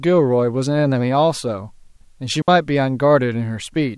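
A digital wireless dropout occurs at 2.42 to 2.48 s: the radio link lost too much data, so the receiver muted for about 61 ms with a very fast fade, leaving a clean gap of near silence in the speech, with no noise burst on either side.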